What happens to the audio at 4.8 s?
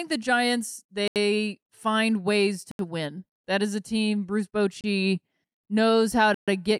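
A Bluetooth stall hits the speech from 4.81 to 4.84 s, a dropout of about 29 ms. The sound cuts to silence and then carries on. The likely cause is radio interference delaying packets on the wireless link, so the headphones' small playback buffer emptied and output paused until the retransmitted audio arrived and refilled it.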